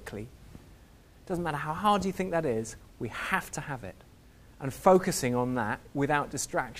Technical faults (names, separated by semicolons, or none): none